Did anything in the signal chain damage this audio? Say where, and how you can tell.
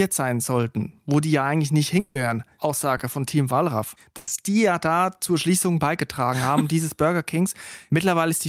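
Yes, the network stage damaged this speech in three places.

From 1.99 to 2.17 s, right after "die ja eigentlich nicht", there is a likely long network dropout. About 160 ms of audio never arrived, and the receiver filled it by extending the last sound. On a spectrogram the harmonics flatten into a smeared band, and then the real audio resumes abruptly.

At 2.97 to 3.01 s a short concealed packet loss replaced 20 ms with synthesized continuation. It is heard as a tiny smear or wobble. On the waveform it appears as a brief stretch of continued sound that blends back into the surrounding audio.

From 4.17 to 4.29 s, just before "die ja da zur", a burst of packet loss removed 100 ms. The decoder held the last sound and faded it as the gap went on. On a spectrogram this is a frozen, weakening band, followed by a discontinuity where the real audio picks up further on.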